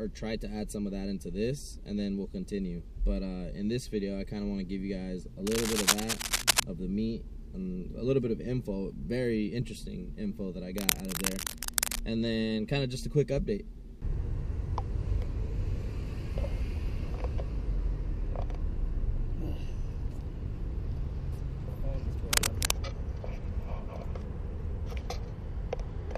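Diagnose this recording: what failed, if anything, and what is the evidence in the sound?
Cable scratch noise at 5.47–6.63 s, 10.78–12.00 s and 22.30–22.76 s: dense, uneven scratching bursts over the sound, the first roughly 5 dB above it, the others about level with it. Analogue wiring stage, likely a worn cable or connector whose contact resistance fluctuated as it moved.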